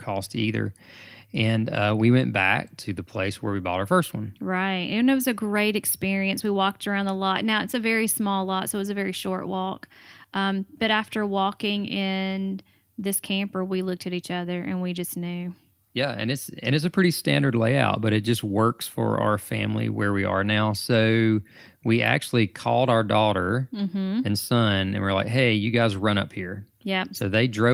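Speech recording with no technical faults detected anywhere in it.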